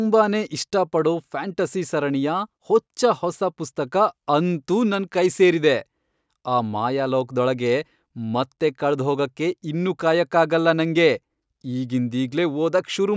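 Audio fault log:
Nothing stood out on listening to the speech in this clip.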